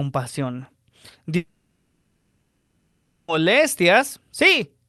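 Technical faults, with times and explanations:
1.36–3.29 s, long network dropout: speech gives way to a fading buzzy hiss, likely concealment of about 1.9 s of lost packets. The spectrogram shows smeared bands thinning to low noise, and the waveform has no true zero before speech resumes with that portion missing.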